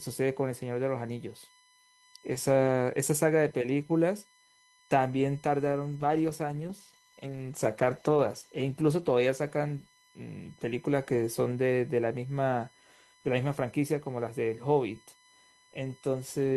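A USB whine runs under the speech from start to finish: a steady tone at 1 kHz, strongest at its harmonic at 2 kHz, sitting well below the speech at roughly 35 dB down. Current drawn in the bus's 1 ms frames is leaking into the audio through power or ground. Mains hum would sit at 50 or 60 Hz and its multiples. This tone is fixed on the 1 kHz grid and much higher in pitch.

From 6.0 s to 10.91 s there is a call bitrate drop. The connection's bandwidth estimate fell, and the encoder coded the speech far more coarsely. The sound fits a fall from about 32 kbps to around 13 kbps, with the lowest stretch lasting about 2.9 s. The speech turns rough, watery and duller in the highs, then clears when the rate recovers. Packet loss would leave gaps or glitches. Here the sound is continuous but degraded across a bounded stretch.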